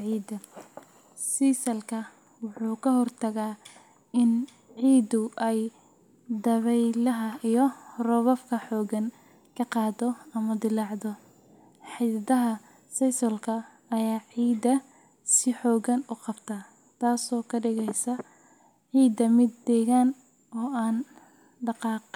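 Nothing in the speech stood out as a technical fault on listening.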